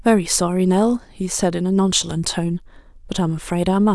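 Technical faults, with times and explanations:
No technical faults, with times or otherwise, are present in this clip.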